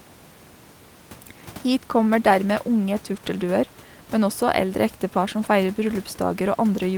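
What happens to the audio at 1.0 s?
Nothing goes wrong at 1.0 s: the speech carries straight through, with only the steady room noise sitting about 26 dB beneath it.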